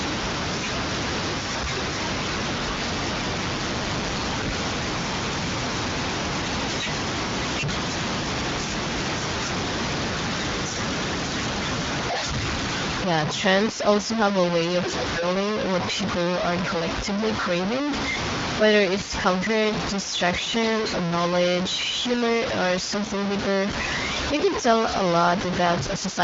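A speech recording carries heavy, gritty distortion from start to finish that rises and falls with the talker, which points to low bit depth without dither, likely a truncation down to only about 3 bits. The error sits at roughly the level of the speech itself, so it is a coarse graininess rather than steady hiss. Because no dither was applied, the quietest passages sputter or drop out instead of resting under an even noise floor, and that is what separates it from ordinary background noise. From 3.43 to 4.23 s an overlap-add ripple adds a metallic buzz with extra tones around the voice. The level pulses by about 6 dB at around 200 Hz, once per reassembled frame. That rate is too quick to sound like a slow fade or gain pumping, and it stops abruptly where the processed section ends, unlike a modulation built into the source. The audio has passed through the AMR wideband (HD Voice) codec at a rate that leaves little trace of its own, with nothing heard above 7.5 kHz.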